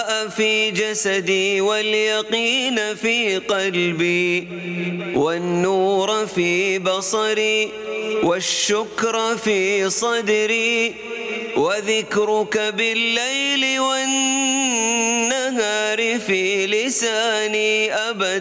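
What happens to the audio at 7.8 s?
At 7.8 s the clip is in the middle of gain pumping that runs throughout. The level swings by roughly 20 dB, most likely because input gain set far too high forces a fast limiter or compressor to clamp down on every loud sound. Loud and soft parts are squashed together. On a waveform the envelope looks flattened, with the troughs filled in between peaks. A spectrogram shows all content below the 8 kHz limit of the call path.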